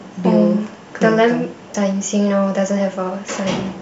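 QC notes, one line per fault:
1.74 s, damaged data in a compressed stream: a glitch in the speech. Some of the compressed frames there got corrupted, so the decoder misreads them, loses sync and jumps ahead to the next good frame header.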